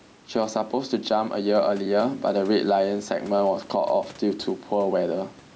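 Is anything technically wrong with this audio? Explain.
Yes. Throughout the clip there is gain pumping, likely from input gain set far too high with a fast limiter or compressor clamping each loud syllable. The level swings by a few decibels, and the sound feels squashed.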